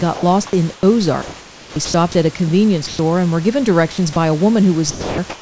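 From 0.14 to 1.94 s the speech is chopped by the voice detector, likely because the sender's detector kept switching transmission off and on. About 810 ms of quiet syllables and word edges are swapped for comfort noise. On the waveform the speech envelope breaks into fragments separated by flat, low-level noise. On the spectrogram, harmonic bands alternate with smooth, even hiss.

At 2.87 to 2.99 s the sound is dropped by the voice detector, likely because it took a quiet stretch for background. Around 70 ms of speech gives way to steady noise, seen as a short gap in the harmonics filled with a featureless band.

Between 3.92 and 4.16 s a second brief chop occurs, likely from the detector again toggling too early. About 90 ms is replaced, leaving a small notch in the waveform where texture turns uniform.

From 4.91 to 5.18 s the sound is dropped by the voice detector again, likely as it judged the trailing speech to be background. 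Roughly 240 ms of speech gives way to steady noise. The waveform collapses to a flat band and the spectrogram shows no harmonic structure.

From 4.91 s to the end, comfort noise replaces the background, likely from the sender pausing transmission. The detailed room noise becomes smooth, evenly spread hiss, still cut off above 8 kHz by the G.722 call path. It shows as a constant, structureless wash on the spectrogram.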